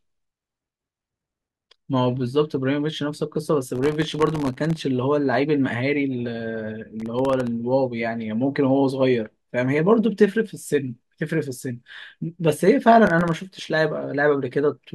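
Processor overload crackle strikes three times, at 3.76 to 4.81 s, 7.00 to 7.47 s and 13.07 to 13.32 s. The processor repeatedly misses its deadlines for very short buffers, which fits blocks of well under a millisecond, and each missed block drops out to silence with hard edges. Dozens of these gaps in the first burst, and far fewer later, tear through the speech as gritty crackle that stops once the load eases.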